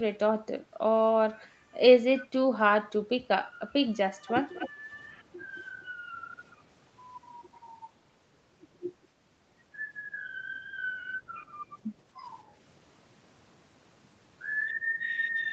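Speech, with a delayed copy of the voice creeping back in three short bursts: 2.19–2.27 s, 4.26–4.31 s and 4.54–4.69 s. That's echo leak, likely from a far-end loudspeaker whose echo canceller let some through, with the copy trailing by about a quarter second and sitting around 20 dB down, the last burst louder at about 10 dB down.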